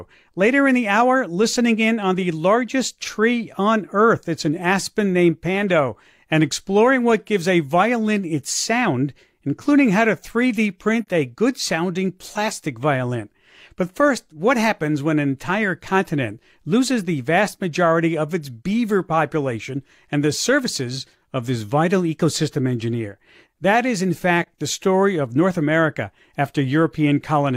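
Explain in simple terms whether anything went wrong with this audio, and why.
Yes. In two places, a piece of the compressed audio stream went missing, which is AAC frame loss with muting. Each time the decoder had nothing to play, so it filled the gap with silence. You hear the speech briefly fade out and back in, leaving a brief dip, first from 11.02 to 11.07 seconds and again from 24.42 to 24.48 seconds. Each dip is about 43 milliseconds long, which fits the loss of a single frame.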